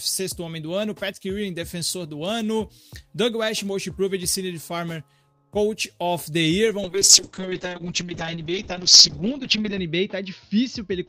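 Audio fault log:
6.85–11.08 s call bitrate drop: encoder rate fell from 32 to 7 kbps, bandwidth narrowing from 20 kHz to 8 kHz, so sound turns coarse, rough and muffled.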